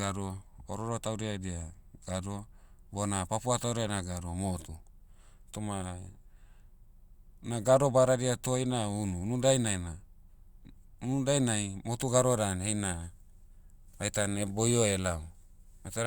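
No technical faults are audible anywhere in the recording.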